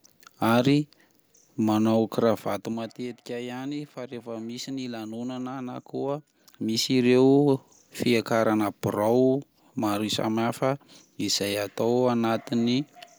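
From 2.30 to 3.06 s, a ticking zipper noise rides on the speech as the level falls by roughly 15 dB, just before "ihany fa rehefa misy". It returns from 5.59 to 7.06 s as the level climbs back. Each tick is an unsmoothed 3 dB step, about five per second on the way down and three per second on the way up.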